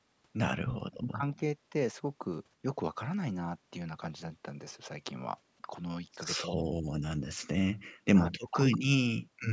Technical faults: speech suppressed in double talk; echo leak

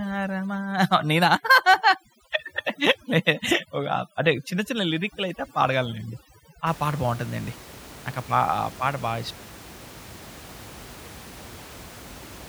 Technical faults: overdone noise removal

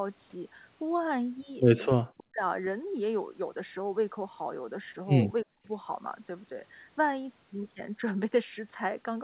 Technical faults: speech suppressed in double talk

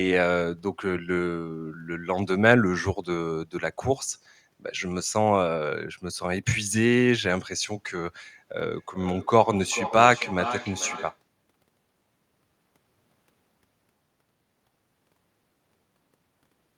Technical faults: feedback echo between two devices

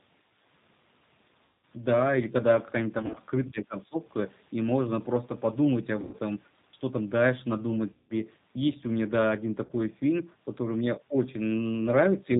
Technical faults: G.729 codec; VoIP packet loss concealed by the speech codec

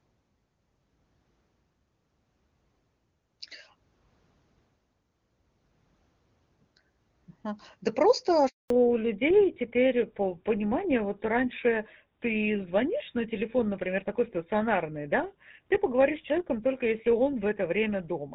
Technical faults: handover gap; fallback to narrowband

